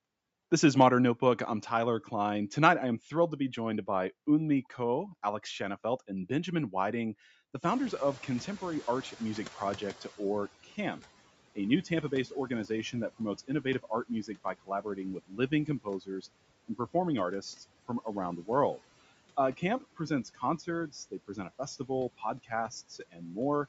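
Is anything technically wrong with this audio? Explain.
Yes. Around 7.5 s the room noise jumps by about 21 dB, and from 7.71 to 10.54 s that noise comes through with less reduction before sinking by about 15 dB. This is the noise suppressor catching up: its noise estimate lagged the sudden rise and took about 2.8 s to adapt.

Speech cut by the noise suppressor follows at 10.64 to 10.78 s, then in stretches between 11.55 and 16.24 s and between 19.57 and 23.21 s. Soft sounds there turn faint and swallowed, dropping by up to about 10, 18 and 14 dB. In each of the longer spans this amounts to well under a second in total. The suppressor mistook those parts for background and turned them down with it.

At 12.65 s there is a brief tick, a block of digital silence only 0.67 ms long. The signal cuts out and back with no fade. A gap that short points to a block of roughly 32 samples left unfilled, most likely because the output buffer wasn't written in time.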